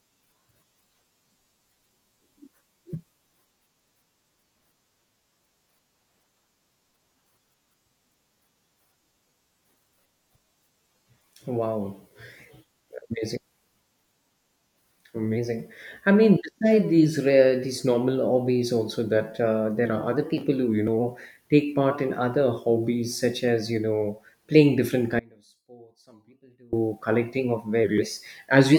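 From 25.19 to 26.73 s, after "you know playing different", the speech drops abruptly to a faint residue until "collecting of". This is an audio dropout, likely a brief signal loss.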